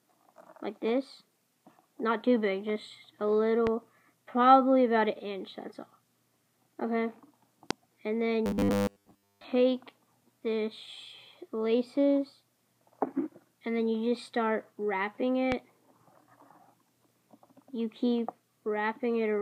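A likely voltage spike, from a plug, switch, static discharge or driver glitch, enters the signal path at 3.67 s, 7.71 s and 15.52 s. Each is heard as a single loud pop, about 15 dB, 20 dB and 15 dB above the surrounding sound, which continues underneath.

From 8.46 to 9.44 s, new audio likely arrives too slowly, so the last 10 ms is looped in place of most of the real material. That fixed repeat imposes a 100 Hz buzz, giving a rigid, metallic robotic sound.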